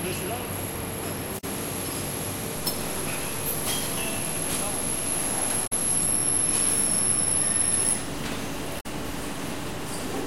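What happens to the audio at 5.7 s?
Damaged data in the compressed stream from 5.63 to 5.73 s makes the decoder misread frames and lose sync, leaving a brief chirp, squawk, click or short hole in the audio.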